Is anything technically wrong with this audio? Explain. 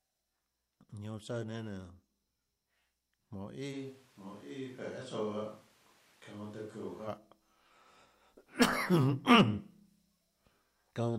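Yes. From 3.75 to 7.07 s the speech suddenly turns roomy and hollow, with thinner bass, then snaps back. This is likely a switch to a distant microphone. The level barely changes. Room noise rises to around 25 dB below the speech.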